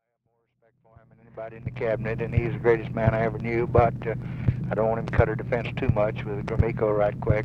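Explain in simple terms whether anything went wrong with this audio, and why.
Nothing went wrong; the gentle opening fade-in is normal.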